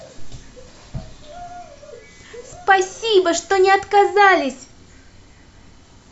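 No technical faults can be heard anywhere in the recording.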